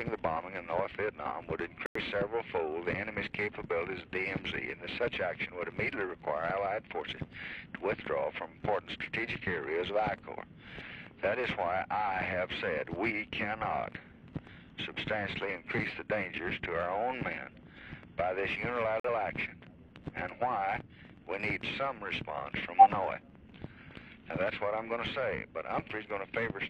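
Corrupt frame muted at 1.86–2.01 s and 19.00–19.09 s: the audio drops to abrupt silence, about two frame lengths and then one, where damaged compressed frames were rejected and blanked. Corrupt frame decoded at 22.76–22.81 s: a short glitch peaking around −10 dBFS, from a few bit-flipped frames the decoder played anyway, misplacing energy across frequencies.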